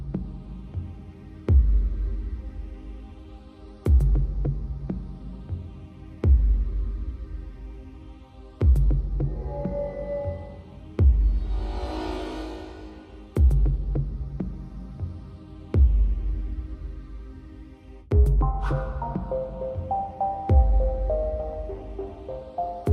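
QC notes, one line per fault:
10.33 to 11.27 s, block size mismatch (truncated): a steady buzz at 46.9 Hz runs through the audio. One stage writes blocks, which fits 1024-sample blocks, and the next reads fewer, dropping each block's tail. Every cut repeats at the block rate. Pace and pitch stay about normal.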